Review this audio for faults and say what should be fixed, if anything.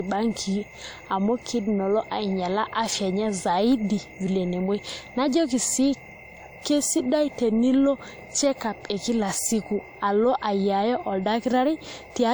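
Across the whole recording, the speech has likely passed through a low-bitrate lossy codec before being saved again as a high-bitrate MP3. This is low-bitrate audio saved at a high bitrate. The second encoding cannot restore whatever the first one discarded, so the generous file size adds nothing back. The sound fits a first pass at around 64 kbit/s, and the large MP3 simply carries those losses forward. Content extends up to about 20.2 kHz, so no obvious band-limit betrays it. To prevent this, export from the original uncompressed source instead of re-encoding an already compressed file.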